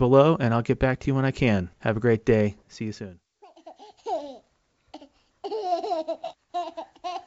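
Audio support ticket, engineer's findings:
No faults found; the speech signal is carried intact over a G.722 wideband path at 64 kbit/s, with the expected bandwidth up to about 7 kHz and at most a faint trace of upper-band coding hiss.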